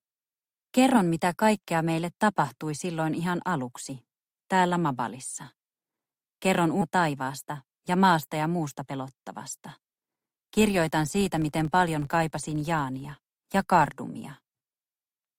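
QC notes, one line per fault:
6.81 s, skip ahead: playback jumps forward abruptly, with about a second of audio missing and no fill inserted. Queued later audio was played once the earlier stretch was discarded, so both sides of the cut butt together almost directly, with no pause.
6.91–8.93 s, jitter buffer speed-up: the audio runs at about 107% speed with its pitch unchanged, so this stretch sounds slightly hurried. The receiver shed its excess buffered delay, roughly 150 ms in total, by removing many short pitch-period-sized pieces in quick succession.
10.38–13.95 s, filter restarted on every block: a regular ticking buzz at 43.1 Hz sits under the audio and rises and falls with its level. The filter resets to silence at each block boundary, and each reset makes a small transient. The rate points to 1024-sample blocks at 44.1 kHz.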